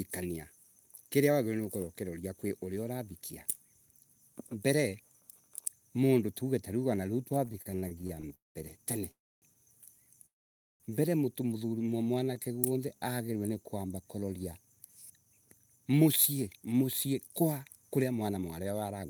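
Right after "mondu tuaue tariu wanariu", from 7.45 to 8.32 s, the speech hits repeated stalls (stutter): packets keep turning up late, the jitter buffer runs dry fourteen times, and the receiver stretches the last sound each time. The gaps are short, the longest about 32 ms, but they fill over a quarter of that stretch, so it drags and stutters without losing anything.

Then come three call audio freezes, at 8.34 to 8.57 s, 9.11 to 9.44 s and 10.26 to 10.82 s, lasting roughly 0.2, 0.3 and 0.5 s. The likely cause is packets held up in transit. Each one starts with a brief carried-over buzz that fades into near silence, and then the speech picks up exactly where it stopped, so the pauses are inserted and nothing is cut.

From 12.14 to 13.33 s, leading into "ni kuamba kuroria", there's a jitter buffer slow-down. The receiver is rebuilding its reserve by repeating single pitch periods, so the speech runs at about 90% speed with the same pitch and sounds a bit drawn out. 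It gains around 126 ms. In the middle of that, at 12.34 s, a short stall from a late packet holds one sound for about 16 ms, a tiny hitch.

Finally, from 14.72 to 19.05 s, after "ni kuamba kuroria", a jitter buffer speed-up trims the surplus delay by cutting out small pitch-period slices. The speech runs about 10% fast at unchanged pitch, sounds slightly hurried, and loses about 0.4 s in total.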